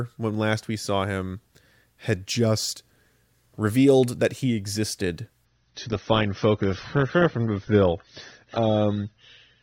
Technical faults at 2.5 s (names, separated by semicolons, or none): none